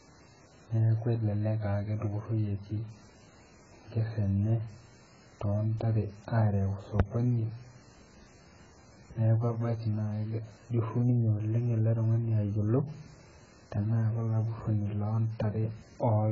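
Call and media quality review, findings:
Speech dull and muffled for the whole clip, nothing audible above 7.5 kHz. Heavy smearing, warbly, fizzy texture on sustained sounds and sibilants. Likely AAC compression (AAC-LC) at a very low bitrate, around 12 kbps: encoder lowers its cut-off, starves the spectrum of bits, leaving gaps and swirling artefacts.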